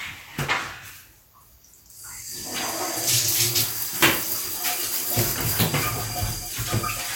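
No technical faults can be heard in this recording.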